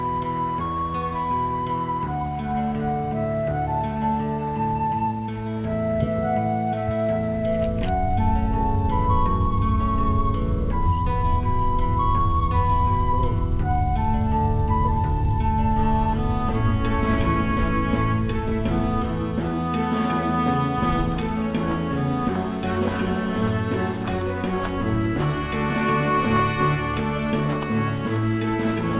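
No faults can be heard: the audio has come through a call path whose narrow band, with nothing above 4 kHz, fits G.711 A-law coding at 64 kbps.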